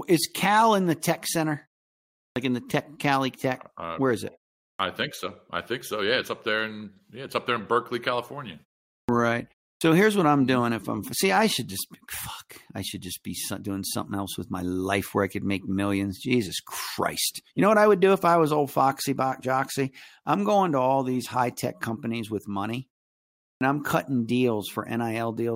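Clipped start after a pause hits at 2.31 s ("in the tech"), 4.74, 9.03, 9.76 ("here's what I'm doing") and 23.55 s ("I'm cutting"). Waking late after 0.31–0.72 s gaps, the output drops 51–61 ms of onset, so speech starts abruptly, showing a hard vertical edge on the waveform and spectrogram.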